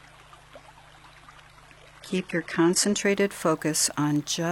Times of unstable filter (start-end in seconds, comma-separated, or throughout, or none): none